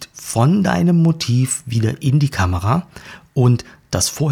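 Listening to this short speech recording, nothing technical stood out at any point.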